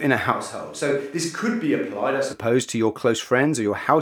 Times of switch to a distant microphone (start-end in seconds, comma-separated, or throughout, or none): 0.32-2.33